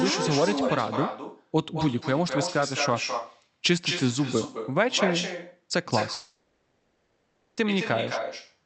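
Across the whole recording the speech is trailed by an echo with no canceller: the far end's loudspeaker feeds back into its microphone, and nothing strips that copy out before it returns. The repeat sits about 7 dB below the direct speech and arrives roughly a fifth of a second later, so each syllable gets a thinner shadow. On a spectrogram every harmonic pattern appears twice, the second copy fainter and shifted right; the waveform shows smeared, doubled onsets.

From 6.13 s to 7.59 s the speech gives way to a buzzy, hiss-like continuation of the last sound that fades as it goes, then the talk resumes with that stretch simply gone. This is likely a long network dropout, with the receiver filling about 1.4 s of missing audio by stretching what it last had. A spectrogram shows smeared, repetitive texture decaying across the gap, still capped near 8 kHz like the rest of the call, and the waveform envelope tapers through it.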